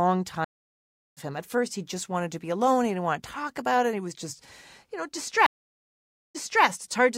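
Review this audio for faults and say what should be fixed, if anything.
The connection dropped twice, and each time the player reconnected and started a fresh decoder mid-stream, a stream reconnect. From 0.44 to 1.18 s the speech stops for about 0.72 s and resumes roughly 0.7 s further on, so a stretch is skipped. From 5.46 to 6.65 s a 0.88 s gap ends with the stream picking up 0.30 s earlier, repeating a short piece. Buffering enough to ride out brief drops and resuming at the exact last-played position would prevent both.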